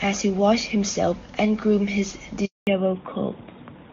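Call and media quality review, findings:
Handover gap at 2.45–2.67 s, right after "himself and groomed his". Sound drops out fast and sits dead silent for about 220 ms. Call leg hopping networks mid-handover, no speech frames getting through until the new link comes up, so that stretch is gone.

Fallback to narrowband from 2.67 s to the end, kicking in right after the gap. Nothing above 4 kHz anymore; it turns duller and rougher than the crisp HD Voice before it, which sounds like AMR-WB at a high rate, probably 23.85 kbit/s. Codec renegotiated to AMR-NB, likely 12.2 kbit/s.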